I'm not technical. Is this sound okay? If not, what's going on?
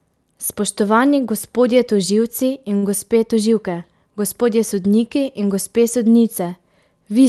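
No. Around 2.77 to 2.85 s there is a short stall from a late packet. A piece of the call audio arrived late, so the receiver stretched the last sound by about 50 ms and then carried on. Unlike a dropout, nothing is cut out; a sound just lingers briefly.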